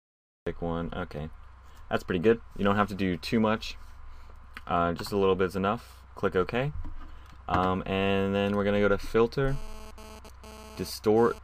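Digital silence fills the first 0.47 s, and then the sound bursts in at full level, already mid-way through, with no attack or fade-in and an abrupt edge at 0.47 s. This is a cut-off start: the recording or stream began a moment late, so the opening of the sound was never captured and playback jumps from nothing straight into its middle.

From 9.48 s to 11.39 s a hard, raspy buzz intrudes, sitting about 20 dB below the programme and pulsing in and out instead of holding steady. Its fundamental is 217 Hz with a dense stack of harmonics that has nothing to do with the underlying audio. This is GSM phone buzz: a nearby 2G handset transmitting in 217-per-second bursts during a data exchange, with the audio circuitry rectifying those radio pulses into sound.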